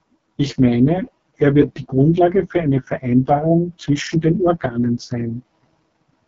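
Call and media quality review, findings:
AMR wideband (HD Voice) codec, throughout: rough, raspy speech, no content above 7.8 kHz; heavy damage fits the lowest 6.6 kbit/s mode's coarse pulse-driven excitation.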